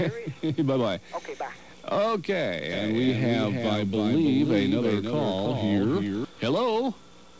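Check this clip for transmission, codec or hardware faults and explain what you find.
One fault is audible. From 2.73 to 6.25 s there is a doubled audio track: a second full-band copy about 5 dB quieter trails by roughly 300 ms, likely from a second, slower capture path. It starts and stops abruptly, with no decay or room colour, beneath the G.722 band limit at 8 kHz.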